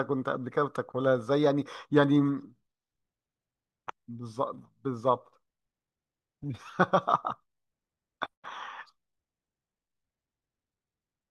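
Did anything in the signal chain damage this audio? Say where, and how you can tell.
No, nothing along the way has left a mark on this recording that I can hear, so there's no point in the chain to single out.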